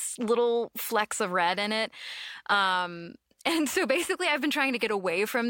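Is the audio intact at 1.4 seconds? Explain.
Yes, the speech at 1.4 seconds is intact, with no dropout, click, distortion or other fault to be heard at that moment.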